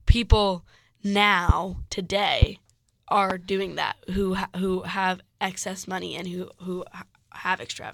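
Sharp, single loud pops cut across the speech at 1.49–1.52 s, 2.42–2.45 s and 3.30–3.33 s, the last just before "doing that who". Each stands far above the speech, the third slightly less so, and is likely a voltage pulse from a switch, static or driver glitch.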